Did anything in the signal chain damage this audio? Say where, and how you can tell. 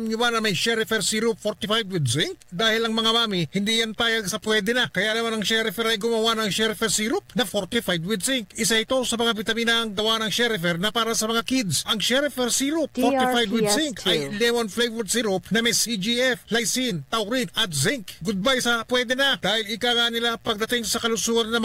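No, nothing in the chain between capture and playback has audibly damaged this audio. No stage leaves a mark anywhere in the sound.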